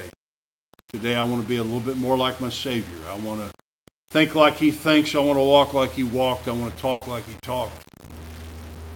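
The audio carries a grainy distortion that follows the signal throughout, sitting roughly 20 dB below it, which points to low bit depth without dither, likely rounding to about 7 bits. At 1.21 to 1.25 s a short concealed packet loss leaves a brief smear where about 20 ms of missing audio was filled by extending the preceding sound. From 6.91 to 7.03 s a burst of packet loss replaces about 100 ms with a continuation of the last sound that fades out, and the audio then resumes further on with that stretch missing.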